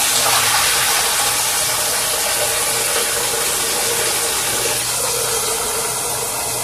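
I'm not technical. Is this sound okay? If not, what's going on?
No. The audio was most likely squeezed hard by AAC compression, which discards detail to save space. Throughout the clip, everything above about 15.5 kHz is gone, so the sound comes across dull and smeared, with a warbly, fizzy edge.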